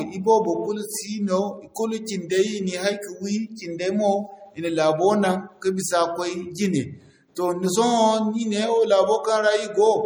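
A watery, swirly quality runs through the whole of this speech recording, with a metallic edge on s sounds and softened consonant attacks. The damage is plainly audible and most likely comes from MP3 compression at a low bitrate, which fits roughly 48 kbps. With so few bits, the encoder drops weak frequency lines that flicker on and off from frame to frame, producing the swirl. The treble stops at about 21 kHz. At 1.74 s a sharp attack is preceded by a brief hiss, about 15 ms long, and the onset sounds smeared. This is pre-echo. The attack lands late in a transform block, and the quantisation noise sized for the loud part spreads back into the quiet moment just before it.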